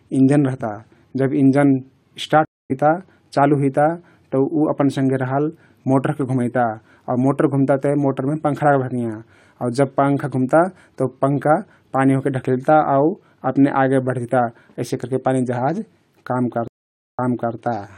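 At 2.45 to 2.72 s, and again at 16.68 to 17.55 s, a stream reconnect drops the speech into silence, about 0.25 s then 0.5 s, while the player rebuilds its connection and decoder. It resumes roughly 0.1 s later, then 0.37 s earlier, repeating audio. That skip or repeat sets it apart from a simple dropout.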